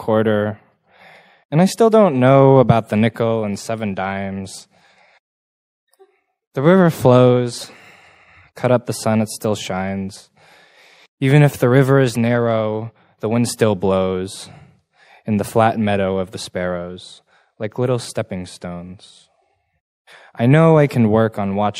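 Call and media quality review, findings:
Watery, swirly texture throughout, plainly audible; likely MP3 compression at a rate that fits a 64 kbps encode. Encoder drops weak frequency lines frame to frame and low-passes the top end. Unlike a single corrupt frame, the damage is continuous, not a discrete event.

Brief chirp/blip at 7.61 s, around -15 dBFS; corrupt frame decoded. Flipped bits in roughly one frame misplace energy in frequency for that frame's length. Unlike the compression swirl, it is an isolated burst, unrelated to surrounding content.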